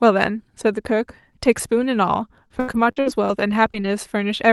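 Speech over an Opus call link, with highs cut near 12 kHz. Lost packets rebuilt from error correction cause brief rough, noisy patches of about 20 ms, at 1.57 to 1.74 s and at 1.92 s. There is no gap. Repeated packet loss from 2.48 to 3.86 s leaves eight holes, the longest 80 ms. Stretched sound fills them, making the audio choppy and robotic.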